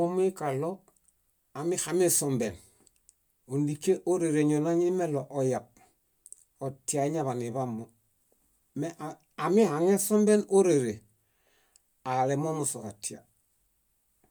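No technical faults are audible anywhere in this recording.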